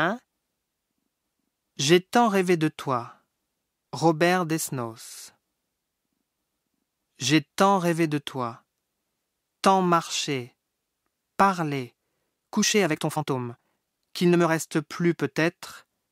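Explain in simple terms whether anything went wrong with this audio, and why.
Software likely squeezed part of the recording to fit a shorter length, producing a time-stretched section from 12.28 to 14.48 s. It sped that stretch up about 1.53 times while keeping the pitch, so the speech suddenly turns rushed, then returns to normal pace.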